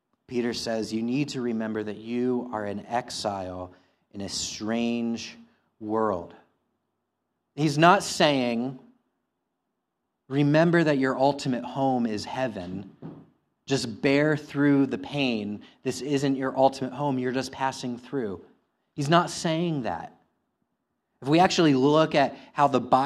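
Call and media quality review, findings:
No audible faults found in this speech recording.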